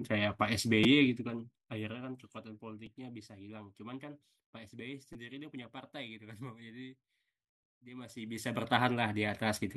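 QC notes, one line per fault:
0.84 s, 2.86 s, 5.13 s: repeated buffer. A 5.8 ms block, consistent with a 256-sample buffer, replays two, one, then three extra times, giving brief buzzing stutters with hard joins.
1.02–2.42 s: zipper noise. The level drops about 20 dB in 1 dB steps, roughly ten per second; each unsmoothed jump clicks, producing audible ticking.
7.99–8.73 s: zipper noise. The level rises about 20 dB in coarser 2 dB steps, about ten per second, so the unsmoothed increments tick as it climbs.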